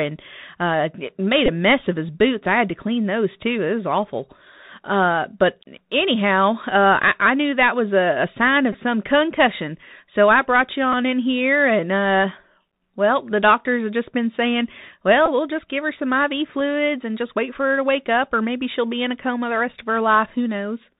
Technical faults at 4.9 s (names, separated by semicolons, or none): Bluetooth CVSD headset codec